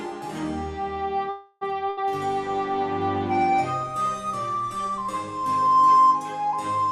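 At 1.29 s the flow of packets likely stalled somewhere along the network path, leaving the jitter buffer with nothing to play: a call audio freeze. For about 0.32 s, until 1.63 s, the receiver stretches the last sound into a fading buzz or hiss. Nothing is lost. When the packets arrive, the audio picks up where it stopped, now running about 318 ms behind.

Shortly after, from 1.89 to 1.99 s, a burst of packet loss occurs: a short run of packets never arrives in time to be played. The receiver holds the last sound for about 78 ms and turns it down as the gap goes on, giving a brief fading buzz or hiss. The audio then resumes further along, with roughly 80 ms of the original simply gone.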